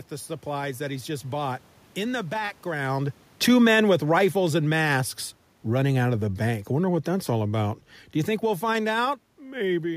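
A speech recording with automatic gain falling from 2.76 to 5.09 s. The gain control judged the input too loud or its background noise too strong and pulled the level down by about 4 dB, so the voice and the room noise sink together, unlike the talker's own movement around 3 s.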